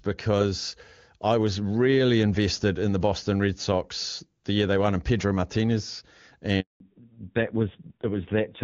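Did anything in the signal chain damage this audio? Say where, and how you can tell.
Yes. The damage happens in the network stage, as a handover gap from 6.60 to 6.80 s. The speech fades out within a few tens of milliseconds and then stays fully silent for 200 ms while the call moves to a new link, so whatever was said in that window is lost. A packet-loss dropout usually gets masked by concealment, which fills in with smeared sound. Here there is just clean silence, followed by a restart that sounds different from what came before.

The second fault is a fallback to narrowband at the codec stage. It starts at 6.80 s and lasts to the end of the clip. Before the switch, the HD Voice coding is clear, with content reaching up to about 7 kHz. After it, nothing is left above 4 kHz. The speech sounds dull and rougher, which points to a low-rate narrowband codec, likely around 5.9 kbit/s. An ordinary low-pass filter would only dull the sound, but this change adds raspiness and begins exactly at the gap.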